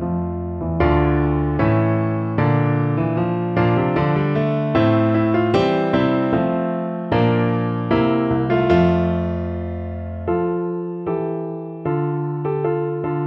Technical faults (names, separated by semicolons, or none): none